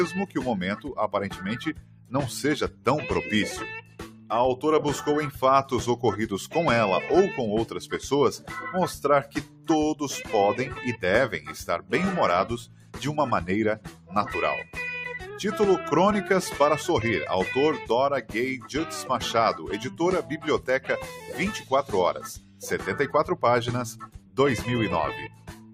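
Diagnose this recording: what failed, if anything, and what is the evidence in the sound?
Noise suppressor applied to music or sounds, across the whole clip: a speech-oriented suppressor in the call-processing stage stayed active on non-speech material. It treats sustained, steady content and decaying tails as background noise and pulls their gain down, while onsets pass. The result is a level that keeps swinging by roughly 10 dB, so the sound pumps and thins as held portions sag.

Sound cut by the noise suppressor occurs at 0.27–2.86, 3.81–4.3, 8.38–9.69, 11.4–14.75, 18.22–18.69, 19.9–22.63 and 23.93–25.73 s. In each stretch the suppressor misjudged sustained or fading sound as noise and attenuated it by about 9 to 11 dB. The affected portions total somewhere between a fifth of a second and about a second per stretch. Transients survive, but tails are clipped short and steady passages sink.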